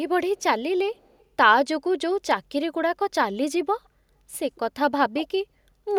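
Echo leak, likely from a far-end canceller missing loudspeaker pickup: faint delayed copies near 0.38–0.43 s and 0.94–1.25 s (168 ms, very quiet), then a much louder one at 5.19–5.25 s (158 ms), appearing on a spectrogram as displaced ghost harmonics.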